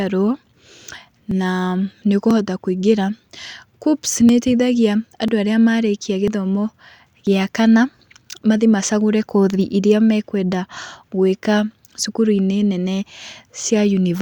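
Tiny skips in the speech fall at 1.31, 2.31, 3.30, 4.29, 5.28, 6.28 and 7.27 s, about once a second. This is overlap between stream segments: where successive 1-second segments overlap in time, the player discards a sliver of real audio, so the waveform jumps.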